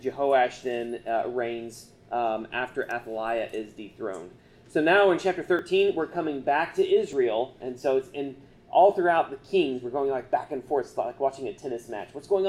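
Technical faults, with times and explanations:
5.59 s and 7.13 s, dropped buffer (overrun): two jumps with the sound skipping ahead, roughly 10 ms then 20 ms missing, likely samples overwritten before being read.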